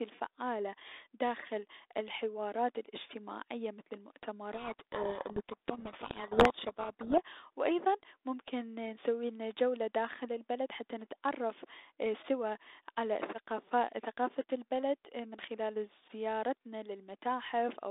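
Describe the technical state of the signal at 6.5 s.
At 6.5 s the speech sits inside a codec payload misread running from 4.53 to 7.2 s, ending just before "و ايضا ممكن نسويلنا". The receiver unpacks the G.726 code words with their bit order reversed, so the decoded speech is buried under harsh, grinding distortion.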